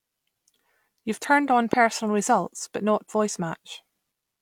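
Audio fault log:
1.73–1.75 s, loud pop: a single sharp pop, well above the speech level, lands on top of the talking, which carries on undisturbed beneath it. This is likely a sudden voltage pulse, from a plug, switch, static discharge or driver glitch, added into the signal path.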